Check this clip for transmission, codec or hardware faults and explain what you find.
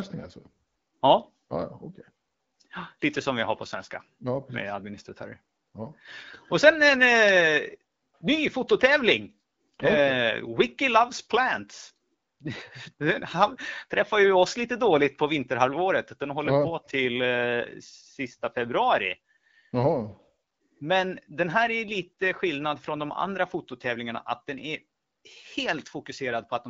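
No transmission, codec or hardware faults turn up anywhere in the speech. The AMR wideband (HD Voice) codec is working at 12.65 kbit/s, where it leaves only light coding damage, and the speech stays clear within its band of about 7 kHz.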